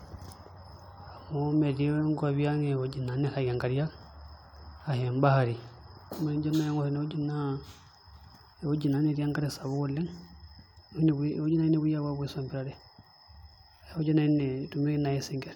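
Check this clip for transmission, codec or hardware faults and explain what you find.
No transmission, codec or hardware faults are audible anywhere in the speech.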